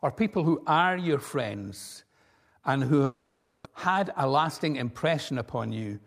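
From 3.04 to 3.66 s the speech gives way to a fading buzz, most likely a long network dropout. About 500 ms of audio never arrived, and the receiver stretched the last sound across the gap. On a spectrogram, frozen horizontal bands dim out, then speech resumes with a part missing.

From 3.87 to 5.56 s a jitter buffer speed-up plays the speech at 105% speed, trimming roughly a tenth of a second of pitch periods to shed the delay. It sounds hurried but keeps its pitch. Harmonic spacing stays unchanged while syllables crowd closer.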